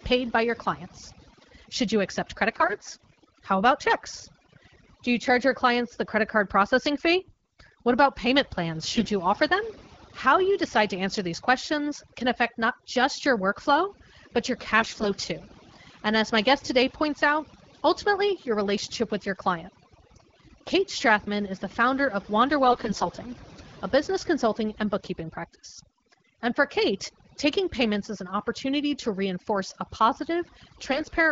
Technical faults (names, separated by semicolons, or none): overdone noise removal; AMR bit errors